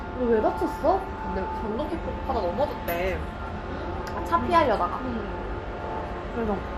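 A recording of everyday sounds carries plainly audible MP2 compression for its whole length. The top end is missing, with nothing above about 15.9 kHz. The remaining highs sound dull and unsteady, as upper bands drop in and out. A gurgling, granular grit sits on the sound. The likely cause is MPEG Layer II coding at a low bitrate, which fits roughly 64 kbps. Too few bits reach the 32 sub-bands. Upper bands are switched off, and the rest are coarsely quantised.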